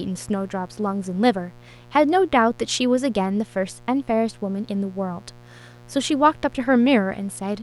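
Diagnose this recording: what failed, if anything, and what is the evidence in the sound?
A dimmer, rectifier or missing shield in the analogue wiring let 60 Hz mains interference in, so a steady, raspy mains buzz sits roughly 25 dB below the speech throughout.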